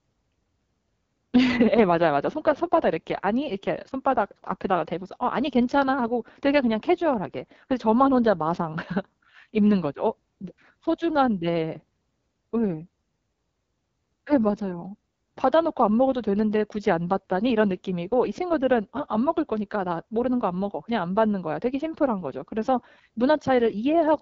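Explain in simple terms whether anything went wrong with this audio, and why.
Something did go wrong, from start to finish. The speech has been squeezed through the AMR wideband (HD Voice) codec, the phone-call format, at one of its lowest quality settings. The codec rebuilds the voice from a simplified model of the throat and mouth rather than keeping the real sound, so at this setting the voice comes out clearly rough and raspy. Nothing survives above about 7.7 kHz, which removes the crisp top end of the speech.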